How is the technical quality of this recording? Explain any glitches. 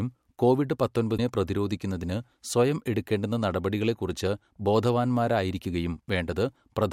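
There is one glitch: damaged data in a compressed stream, from about 1.14 to 1.19 s, just before "പ്രതിരോധിക്കുന്നതിന് സ്വയം എടുക്കേണ്ടുന്ന നടപടികളെക്കുറിച്ച്". A stretch of the encoded stream arrived corrupted, so the decoder misread those frames, lost its place and had to hunt for the next valid frame header before resuming. In the speech this comes out as a brief chirp, squawk, click or short hole lasting about 50 ms.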